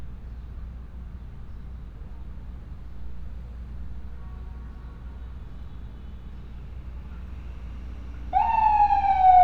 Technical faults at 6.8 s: none

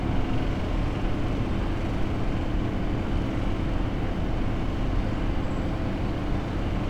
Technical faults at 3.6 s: none

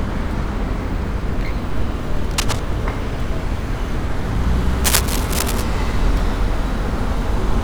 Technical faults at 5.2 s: cable scratch noise

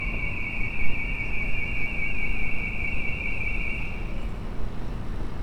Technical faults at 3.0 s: wrong sample rate

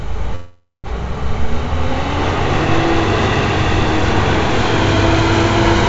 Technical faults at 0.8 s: call audio freeze

